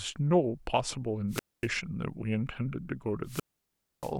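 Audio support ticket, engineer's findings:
Hiss swell, then near-silent hole, speech resumes at 1.29–1.69 s (mute about 0.24 s). Wireless microphone squelch dropout: FM receiver loses carrier, squelch gates output.

Same wireless microphone squelch dropout, longer, at 3.24–4.14 s (mute about 0.63 s). Static rises before the gap. Check transmitter battery, antenna placement and range to the receiver.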